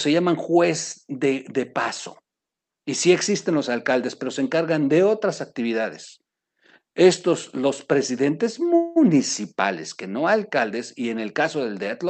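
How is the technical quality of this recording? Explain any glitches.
The recording has one glitch, a call audio freeze from 8.75 to 8.98 s, just after "estos los presidentes". Packets were likely delayed in transit, so the jitter buffer ran empty and the receiver extended the last sound as a fading tail for about 0.2 s. The speech then resumes where it stopped, with nothing lost and everything after it running slightly late. The call codec path is audible as a top end that stops at around 8 kHz.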